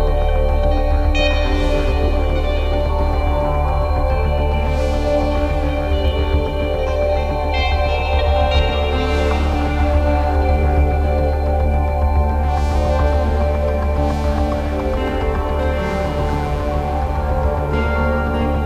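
Rounding to a low bit depth without dither, likely to around 8 bits, runs through the whole clip. With no dither, the rounding error follows the audio, giving grainy distortion on quiet passages, with error sitting around 40 dB below the signal and low-level detail sputtering or dropping out.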